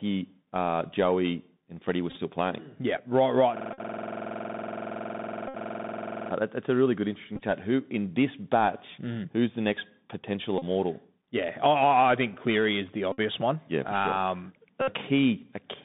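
Speech carried over the Bluetooth CVSD headset codec, band-limited to roughly 150 Hz to 3.7 kHz. The one-bit slope coding at 64 kbps leaves a granular hiss under everything and scratchy sibilants; on a spectrogram nothing appears above 3.7 kHz, and the floor looks grainy. Bluetooth headset packet repeats occur at 2.1, 3.73, 5.48, 7.36, 10.58, 13.12 and 14.82 s, each lasting roughly 35 to 65 ms. The chip decodes the previous packet's bits again every 3.75 ms, which gives a brief buzz near 267 Hz. The episodes at 2.1 and 7.36 s are broken into short bursts, the longest under about 20 ms. A waveform shows a tiny repeating cell in each one. From 3.57 to 6.31 s a system hang loop takes over: one 46.44 ms slice, which fits a 2048-sample ring buffer, cycles about 59 times at 21.5 Hz. It sounds like a machine-gun stutter and shows as identical waveform blocks and vertical striping on a spectrogram.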